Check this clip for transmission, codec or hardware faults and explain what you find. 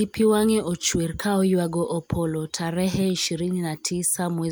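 Nothing in the speech stood out as a problem on listening.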